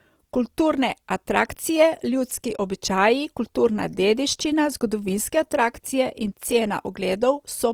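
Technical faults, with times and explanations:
Throughout, Opus compression: the encoder was likely starved of bits, at a rate that points to about 24 kbps in its CELT music mode. It keeps the energy in each frequency band but rebuilds the fine detail of starved bands by folding in copies of lower bands or filling them with noise. The speech keeps its full bandwidth without obvious holes or swirling, yet voiced tones turn rough, grainy and noisy, and the damage is plainly audible.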